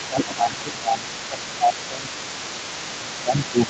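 A faint second voice runs underneath the speech from the very start to the end, sitting roughly 15 dB below it. This is the other side's voice leaking through, likely far-end audio from the loudspeaker that the echo canceller failed to fully remove from the microphone.

From 0.08 to 1.1 s and again from 1.27 to 2.11 s, the main speech sinks by as much as about 15 dB in patches. From 2.86 s to the end it dips by about 10 dB. This is speech suppressed in double talk, likely the echo canceller turning everything down while both sides talked at once.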